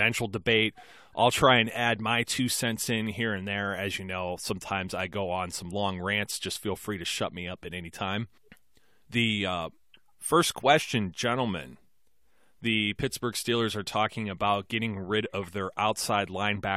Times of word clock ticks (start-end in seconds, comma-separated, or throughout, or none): none